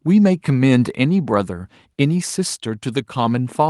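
No audible technical faults here.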